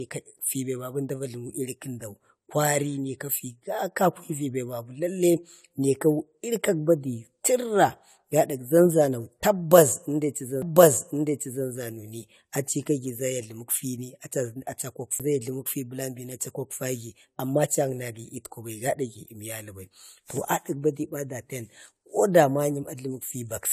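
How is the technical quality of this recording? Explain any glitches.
The recording has two CD skips, at 10.62 s and 15.19 s. Each time the laser jumped onto a different turn of the spiral, so you hear a tiny mute, a few milliseconds and then about 10 ms, and the speech lurches to a new spot.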